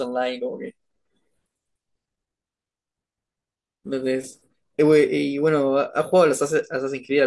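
No technical faults can be heard in this recording.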